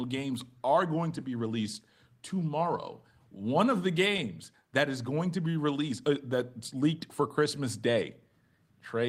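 Clock drift between sender and receiver runs through the whole speech clip. The sending end's clock runs slow, by roughly one and a half percent, so audio arrives a little more slowly than the receiver plays it out. The jitter buffer keeps draining, and the receiver has to stretch the stream to avoid running dry. The delivery never quite settles into a steady pace, with small hiccups recurring at uneven intervals.

Repeated timing corrections span 0.02 s to 8.67 s and show how the receiver handles that drift. It repeats short fragments over and over, all in the same lengthening direction, bringing the effective playback rate to 98 percent and adding around 150 ms in total. Each repeat is small and irregularly spaced. Together they produce a faint stutter and a slightly dragging, unsteady rhythm rather than any single obvious glitch.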